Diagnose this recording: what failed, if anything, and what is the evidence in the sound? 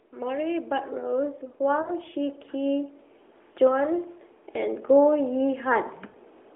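Call processing is where the automatic gain rising comes from. The AGC decided the input was too quiet and crept its gain up, once from 0.11 to 3.01 s by about 6 dB, then again from 3.59 to 5.95 s by about 5 dB. You hear the speech and background swell together.

Lost AMR speech frames point to the network. There's a short smeared dropout at 1.82 to 1.89 s, about 40 ms, which fits two 20 ms frames. Another at 6.08 to 6.17 s, about 60 ms, fits three. The narrowband AMR decoder stretches the last good frame and fades its gain, so speech drags briefly before recovering.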